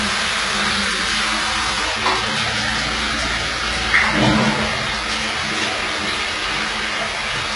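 An everyday-sound recording with heavy coding damage from start to end: the treble is bright but synthetic, gritty and metallic, and nothing survives above 11 kHz. This is likely HE-AAC compression, where upper bands are copied from below, and the depth of damage fits roughly 12 kbps.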